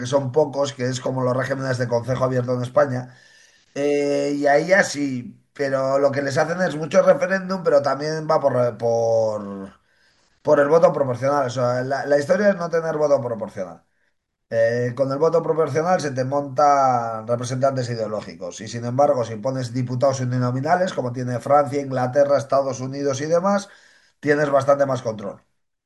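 Listening to this speech recording, nothing technically amiss stood out at any point.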